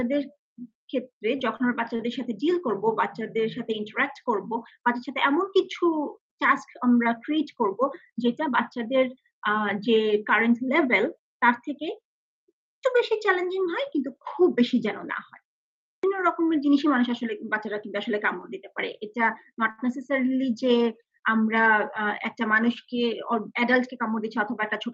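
At 1.56 s, 1.96 s and 19.71 s, short stalls from late packets hold the last sound for 36, 35 and 77 ms, which shows as smeared, flat spectrogram bands with a slight buzz or dip.

From 23.02 to 24.05 s, a jitter buffer speed-up trims short pitch-period pieces, about 50 ms in all. The sound plays about 4% faster at unchanged pitch, and whole waveform cycles are cut out with no spectral shift. Through the Opus call path, the spectrogram stops near 8 kHz.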